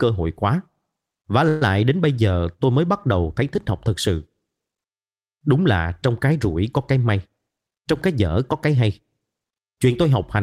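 Speech, with two jitter-buffer faults. A call audio freeze runs from 1.48 to 1.62 s, just before "đến bây giờ tôi": the last sound is stretched into a fading fill for about 130 ms, likely because packets stalled and the buffer ran dry. Nothing is lost, but the speech resumes 129 ms later than before. From 7.29 to 8.66 s, right after "rủi có cái may", a jitter buffer speed-up plays the speech at 110% speed with unchanged pitch. The receiver cuts many pitch-period-sized pieces, roughly 150 ms in total, to drain excess buffered audio, so the delivery sounds hurried.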